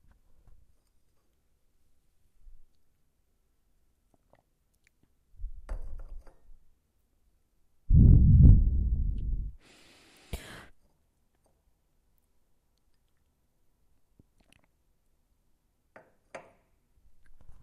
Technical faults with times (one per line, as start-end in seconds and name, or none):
none